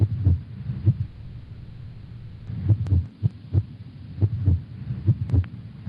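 At 1.05 s the audio stops moving forward and the last sound is drawn out as a fading buzz or hiss that fills the whole stretch to 2.49 s with no stretch of plain silence. The sound then resumes further along, with about 1.4 s of material simply gone. This is a long network dropout: the likely cause is that packets stopped arriving, so the receiver concealed the gap by extending what it last had instead of playing the lost section.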